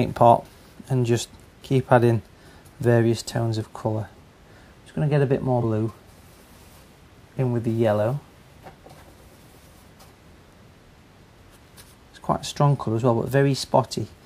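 At 5.60 to 5.63 s, compressed frames skipped: about two 46.4 ms frames go missing, and the audio jumps ahead roughly a tenth of a second.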